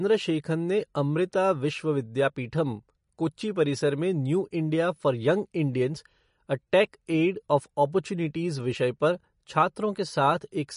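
Speech with watery, swirly smearing and no content above 10.6 kHz throughout, likely MP3 compression at a low bitrate around 40 kbps. Unlike a plain low-pass filter, the damage shifts from frame to frame. From 0.0 to 5.89 s, a steady 43.1 Hz buzz marks a block size mismatch (truncated), consistent with 1024-sample blocks losing their tails. Pacing stays essentially normal, so the buzz's fixed rate sets it apart from codec swirl.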